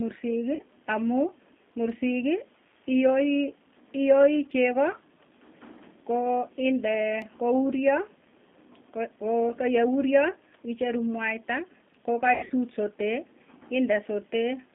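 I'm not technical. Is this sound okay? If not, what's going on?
No. The whole clip has passed through the G.729 codec, a low-rate phone-call format that rebuilds speech from a simplified model of the voice. Everything above about 3.5 kHz is gone, so the speech sounds thin, rough and slightly synthetic throughout.

There is also VoIP packet loss concealed by the speech codec, at 0.55 to 0.61 s and 12.34 to 12.52 s. Pieces of the call went missing, and the decoder filled the gaps by stretching the last sound into a fading tone or noise. The second, longer dropout is broken up by brief returns of sound.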